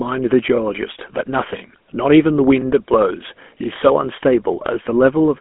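Speech, heard through a GSM full-rate codec throughout. It sounds plainly buzzy and gravelly, fitting a 13 kbps rate. Nothing passes above 3.7 kHz.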